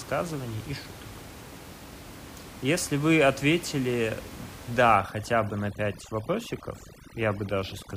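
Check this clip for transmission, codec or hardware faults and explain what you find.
One processing fault is audible, from 4.95 s to the end of this speech clip: overdone noise removal. A noise suppressor set far too aggressively starts pulling down any frequency band close to its noise estimate, and the softer parts of the speech fall below that threshold. The room noise, which sat about 17 dB under the speech, collapses into near-silence flecked with twinkling specks.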